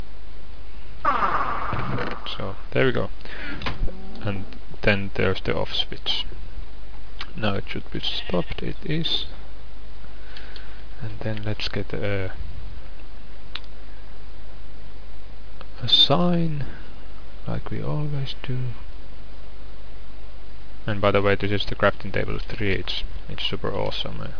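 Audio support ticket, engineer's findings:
No technical faults found on listening; the signal path shows no dropouts, distortion, timing errors or level problems across the capture.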